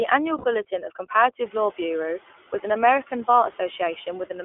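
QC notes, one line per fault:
throughout: noise suppressor artifacts. Steady background noise dips between phrases and swells back under speech; the room noise rises about 23 dB around 1.5 s. The suppressor pulls noise-dominated bands down by about 8 dB each frame, so gain keeps jumping.
throughout: iLBC codec. Speech sounds narrow, slightly rough and synthetic, with nothing below 300 Hz or above 3.4 kHz. This is a narrowband VoIP codec rebuilding each 20 ms frame's excitation independently, and the damage is plainly audible, which fits its 15.2 kbps mode.
0.38–0.46 s and 3.52–3.55 s: lost iLBC frames. Each gap is filled by a held, faintly buzzy, breathy vowel-like sound, about 60 ms and then about 20 ms long, before normal speech returns almost at once. The decoder repeated the last pitch cycle blended with noise, which points to three frames and then one frame missing.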